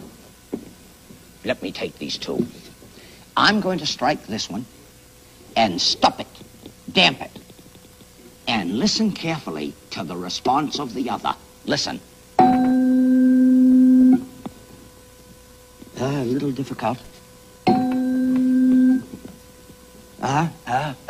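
No technical faults can be heard anywhere here.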